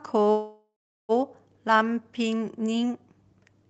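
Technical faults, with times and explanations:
0.31–1.12 s, call audio freeze: packets likely stalled and drained the jitter buffer, so the last sound fades as a buzz or hiss into 0.39 s of silence before the speech resumes with nothing lost.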